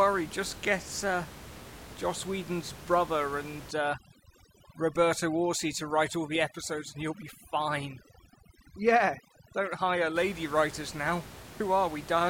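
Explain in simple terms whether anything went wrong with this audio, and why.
From about 3.71 to 10.16 seconds, the room hiss behind the speech suddenly drops and breaks up into twinkling, warbling specks. That is overdone noise removal. A noise-cleaning tool was set too strong. It shuts off any slice of the sound that seems close to the background hiss, and in doing so it also strips away the softer parts of the voice.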